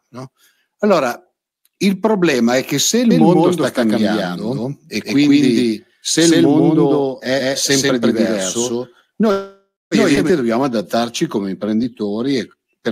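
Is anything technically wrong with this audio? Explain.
Yes, there are four distinct problems in this speech clip.

Doubled audio track, from 3.11 s to 10.30 s, starting just after "è che se il". A second full-band copy of the same speech runs about 150 ms behind the first at roughly equal loudness. This is likely a second capture path or an edit holding two unaligned copies. It sounds like a dry slapback echo with no room tail or decay. Both its start and its end are abrupt.

Call audio freeze, from 9.31 s to 9.94 s. Packets were likely held up in transit and the jitter buffer ran dry. The receiver stretched the last sound into a fading sound for about 0.6 s. The final 220 ms of that stretch drops to silence. When audio resumes it picks up exactly where it stopped. Nothing is lost, but a 0.6 s gap has been inserted and everything afterwards runs later.

Skip ahead, at 10.15 s to 10.19 s. 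Roughly 0.4 s of speech was discarded while later audio was already queued. Playback jumps forward with only a tiny 11 ms bridge. The sounds on either side butt almost directly together, so a fragment of speech simply vanishes.

Jitter buffer slow-down, from 10.45 s to 12.79 s. Running low on reserve, the receiver repeated single pitch periods and slices of pauses, adding 236 ms in total. Speech plays at about 90% speed without any change in pitch. Vowels and pauses sound drawn out.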